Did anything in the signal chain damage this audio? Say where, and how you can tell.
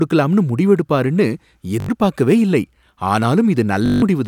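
Yes. Bluetooth stutter on the wireless link: packets arrived late or went missing, so the receiver kept replaying its last short buffer. The speech turns into a rapid buzzing repeat at 1.80 to 1.89 s (81 ms) and 3.86 to 4.02 s (163 ms), then jumps ahead as if it had kept playing.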